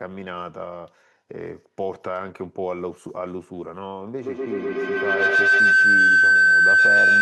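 Speech with feedback howl from 4.22 s to the end: a looping microphone-to-loudspeaker path, repeating roughly every tenth of a second, builds into a tone near 1.5 kHz, peaking about 13 dB above the speech. A spectrogram shows a bright horizontal band; the waveform swells.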